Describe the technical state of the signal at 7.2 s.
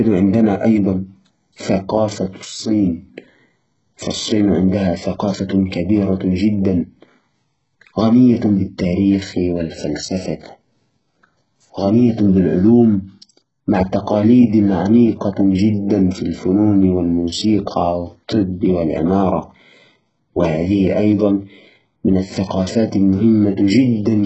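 HE-AAC compression is present at 7.2 s, as it is across the whole clip. At 7.2 s the speech is likely passing through a very low-rate coder, which fits roughly 8 kbps. Only the lower spectrum is coded, and the treble is rebuilt by copying lower bands upward. Nothing remains above 8 kHz, and the damage is heavy: s sounds come out gritty and lispy, with a metallic edge.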